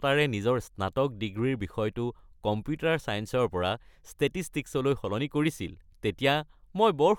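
Nothing in this recording of speech stands out as a technical fault, so there's nothing to point to at any moment from beginning to end.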